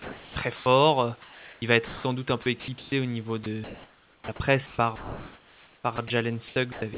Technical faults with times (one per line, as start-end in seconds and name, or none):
0.00-0.66 sound chopped by the voice detector
1.22-2.04 sound chopped by the voice detector
2.42-2.92 sound chopped by the voice detector
3.44-4.28 sound chopped by the voice detector
4.66-6.10 sound chopped by the voice detector
6.48-6.98 sound chopped by the voice detector